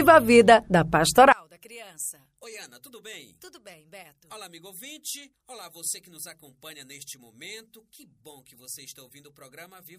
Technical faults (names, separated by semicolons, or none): one channel inverted